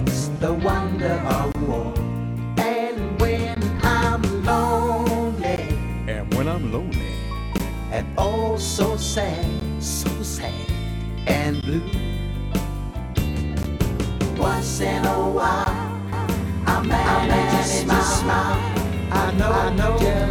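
Gaps at the joins of separately encoded pieces open in otherwise continuous sound every 2 s. The first runs from 1.52 to 1.55 s (about 26 ms), and shorter 16 ms dropouts follow at 3.55, 5.56, 7.58, 9.60, 11.61, 13.63 and 15.64 s. Each encoder run left its start-up delay and padded final frame in place. On a waveform these show as thin flat notches with slightly smeared edges, and on a spectrogram as narrow vertical blank stripes across all frequencies. From 16.13 s to the end, a doubled audio track appears. A full-band copy of the same sound sits roughly 400 ms behind, at about the same level, and cuts in abruptly with no decay or room colour. It is likely a second capture through a slower path, or an edit holding two copies out of step. A spectrogram shows every pattern repeated as a shifted twin, and the waveform thickens suddenly where the copy begins.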